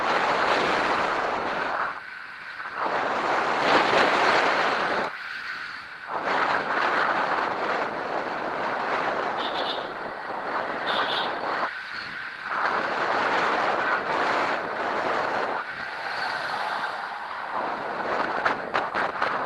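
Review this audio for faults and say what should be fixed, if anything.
No faults; nothing to fix.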